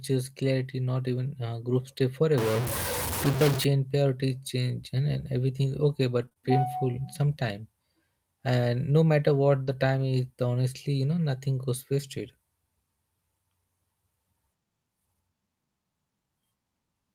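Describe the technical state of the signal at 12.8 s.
At 12.8 s the speech signal is intact, with no audible dropout, distortion, glitch or other technical fault.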